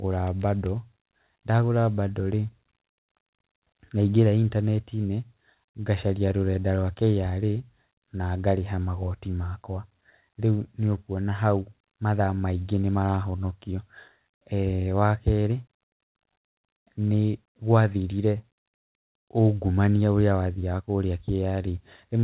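No technical faults occur in this speech, which comes over a call path that carries nothing above 4 kHz.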